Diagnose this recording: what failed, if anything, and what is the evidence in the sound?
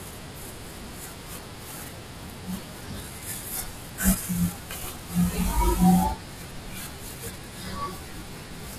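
The speech is slowed and lowered throughout, running at about 0.73 times normal speed and sitting roughly 5.6 semitones flat. This is a playback-stage wrong sample rate fault: unconverted samples clocked out too slowly, which fits 44.1 kHz material played at 32 kHz.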